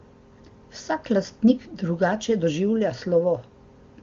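No technical faults can be heard in this speech. It has come through the AMR wideband (HD Voice) codec with little or no audible damage, which points to one of the codec's highest rates, around 24 kbit/s.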